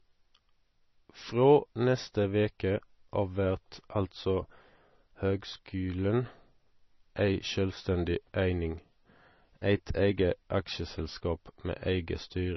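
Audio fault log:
Throughout, MP3 compression. Nothing is heard above 5.9 kHz, so the treble is gone and s sounds lose their edge. The speech has a heavy watery, swirling quality. Faint detail flickers in and out as weak frequency bands are dropped and restored between frames. Consonant attacks smear. This is likely a starved MP3 encoder discarding what its hearing model rates least important. The damage fits a bitrate of around 24 kbps.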